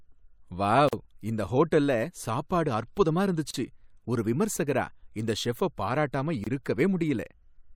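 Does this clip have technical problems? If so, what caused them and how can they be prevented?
Yes. The speech has three short dropouts, each a gap at a join of encoded pieces: 0.89–0.93 s (42 ms) just before "இந்த ஹோட்டல்ல சாப்பாடு அற்புதமா", 3.51–3.54 s (34 ms) between that phrase and "ஒரு விமர்சகரா", and 6.44–6.47 s (26 ms) after "செஃப்ப பாராட்டாம". Separately encoded segments were joined with their encoder start delay and final-frame padding left in, so the sound breaks off briefly and resumes where it left off. Prevent this by trimming encoder delay and padding before concatenating.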